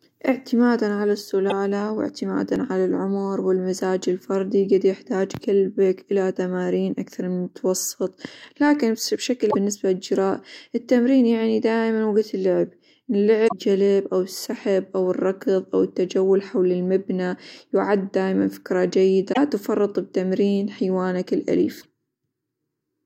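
Brief glitches in the speech come at 1.50–1.52 s, at 2.56 s a skip, then more glitches at 9.50–9.55 s (after "من المتوسط لكن بشكل", before "للجراء التمرين يعني دائمًا"), 13.44–13.53 s (before "أو السحب أو الركظ"), 19.29–19.38 s (between "المبنى يعد دايمًا فكرة" and "تفرط بتمرين") and 21.77–21.86 s. These glitches are damaged data in a compressed stream. Corrupted bytes made the decoder misread frames, lose sync and resume at the next valid frame header. The skip at 2.56 s is likely a dropped buffer (overrun), where roughly 15 ms of samples was overwritten before it could be read and the two sides were joined directly, with no gap of silence.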